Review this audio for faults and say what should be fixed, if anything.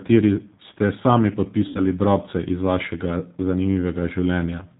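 Throughout the recording the speech sounds slightly rough and synthetic, thin at the top, with nothing above 4 kHz. This is plainly audible G.729 codec damage, which fits an 8 kbit/s G.729A stream. The decoder rebuilds each 10 ms frame from a vocal tract filter, a pitch predictor and a few pulses, so the fine detail of the original waveform is lost. To prevent it, carry the call on a wideband or higher-bitrate codec such as G.722 or Opus.

From 1.68 to 1.81 s the sound smears into a stretched, buzzy tone or coloured noise that fades, and it stays weak or distorted for a short while after. This is VoIP packet loss concealed by the speech codec. About 70 ms of audio went missing, which points to seven lost frames. The decoder filled the gap by repeating its last pitch and filter at falling gain. Each frame depends on the one before, so recovery lags behind the returning packets. To prevent it, reduce loss on the network path with QoS prioritisation, or add forward error correction or redundancy to the stream.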